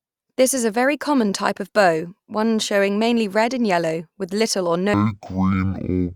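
From 4.94 s to the end at 6.15 s, the speech drops to half speed and an octave lower, the sign of stereo read as mono: alternating left and right samples are taken as consecutive samples of one channel, so each moment of audio is stretched across twice the time. On a spectrogram the harmonics sink to half their height and crowd closer together, with a fainter mirrored copy across the upper half; the waveform's syllable envelopes look twice as long.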